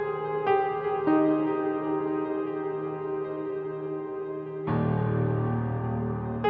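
Nothing goes wrong anywhere in this music clip; it simply comes across with the narrower top end you'd expect from a call, with nothing above about 8 kHz.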